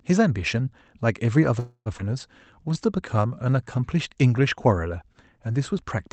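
At 1.59 s the speech stalls in a call audio freeze lasting until 1.89 s. The last sound is stretched into a fading buzz for about 264 ms, the final 70 ms of it silent, and then speech resumes intact. This likely came from packets held up in transit.

At 1.98 s there is a skip ahead of about 0.04 s. Roughly 150 ms of speech is dropped and the two sides are joined almost directly, so the audio jumps forward with only a brief seam.

From 2.37 to 3.64 s a jitter buffer slow-down stretches the speech to 89% speed at unchanged pitch. Repeated pitch periods add 152 ms as the buffer rebuilds its reserve, so sounds are audibly drawn out. The audio is band-limited to about 8 kHz throughout, consistent with Opus at roughly 40 kbps.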